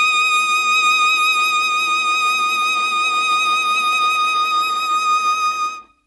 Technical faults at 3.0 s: Dolby Digital compression

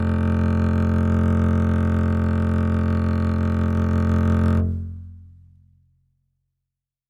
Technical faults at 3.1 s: none

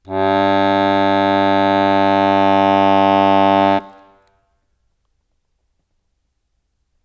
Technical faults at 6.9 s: none

